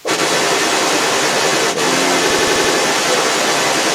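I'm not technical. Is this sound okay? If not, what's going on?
No. Three separate problems can be heard.

Right at the very start, for only the first few hundredths of a second up to about 0.04 s, the talker's voice briefly drops in volume and then recovers. This is speech suppressed in double talk. The likely cause is that both people were talking at once. The call's echo canceller couldn't tell the talker apart from the other person's sound coming out of the loudspeaker, so it turned everything down for a moment.

Throughout the whole clip, a second voice sits underneath, roughly as loud as the main talker or a little louder. This is the other side's voice leaking through. The talker's device is playing the far person out loud, and the microphone picks that up again. The likely cause is an echo canceller that failed to strip that played-back sound out before sending the audio on.

From about 2.30 to 2.73 s, the sound turns into a rapid mechanical stutter. 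One tiny slice, under a tenth of a second long, repeats five times at roughly twelve repeats per second. This is a system hang loop. The computer froze for an instant while the sound hardware kept replaying the same small chunk of audio it was holding, which fits a 4096-sample buffer, until the system caught up again.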